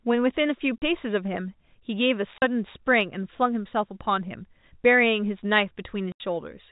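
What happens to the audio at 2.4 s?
The speech drops out abruptly from 2.38 to 2.42 s, a 40 ms hole of dead silence with hard edges as the sound cuts off and snaps back. This is packet loss filled with silence: data never reached the receiver, and instead of concealing the gap it played nothing. The length fits two lost 20 ms packets, a common size for G.711 telephone calls, and here the 4 kHz telephone band carries the speech on either side of the gap.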